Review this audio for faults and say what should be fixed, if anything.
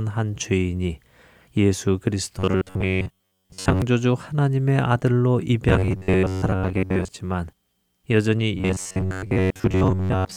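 Robotic sound from repeated short buffers affects the speech at 2.39–3.82 s, 5.69–7.08 s and 8.58 s to the end. Most of the audio in these spans appears to be replayed rather than new, which likely means buffers are arriving late and the last block is looped. This fits a buffer of about 10.7 ms, which sets a rigid 93.8 Hz metallic buzz. On a spectrogram this shows as evenly spaced horizontal harmonics at multiples of 93.8 Hz, and the waveform shows identical cycles repeating. To prevent it, enlarge the jitter buffer or fix the delivery stalls so that audio never runs dry.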